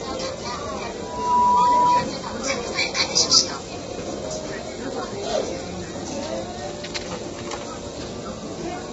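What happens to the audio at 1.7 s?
A loudspeaker feedback squeal is underway: a microphone is picking up the loudspeaker it feeds, and near 982 Hz the loop gain exceeds one. From 1.00 to 2.09 s that single tone swells within about a third of a second into a steady squeal roughly 10 dB above the rest of the sound.

Underneath, the audio is likely coded with low-delay AAC compression (AAC-ELD) at a rate that fits around 16 kbps. Its short frames resolve harmonic detail poorly, leaving the sound heavily rough and grainy, with nothing above 7.7 kHz.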